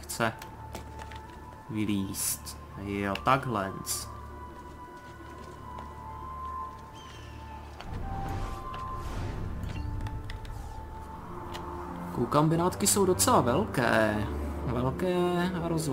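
At 11.62 s there is a brief patch of lost LE Audio frames: about 10 ms of the Bluetooth stream never arrived, which fits a single missing LC3 frame. The decoder filled the hole by repeating the previous spectrum with randomised signs, so the sound turns for an instant into a noisy smear. That smear, with no hard click and no drop into silence, sets it apart from a plain dropout or a clipped glitch. The light codec softening around it is ordinary compression.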